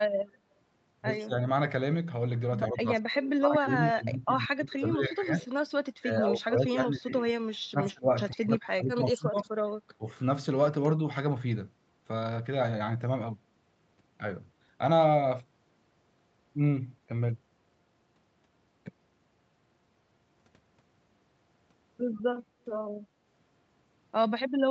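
Speech suppressed in double talk at 1.25, 2.7 to 5.51, 5.99 to 8.13, 8.3 to 9.5 and 9.98 s: the speech sinks by about 20 dB, and by about 30 dB in the 5.99 to 8.13 s stretch, sometimes dulling and breaking into fragments. This is likely an echo canceller that mistook the near talker for loudspeaker echo while both sides spoke, and attenuated everything. The audio stops at 8 kHz throughout, consistent with the call codec's bandwidth.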